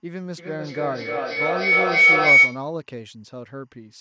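Linear timecode is leaking into the speech from start to end, switching between tones near 1 and 2 kHz at a rate that fits 24 frames per second. It sits far below the speech as a faint, steady chirping warble.

From 0.38 to 2.74 s, two devices on the same call form an acoustic loop that gains level on every pass, producing feedback howl. The repeats narrow to a tone near 2 kHz, coming back roughly every 0.3 s and peaking about 14 dB above the speech. The call's band top is near 8 kHz.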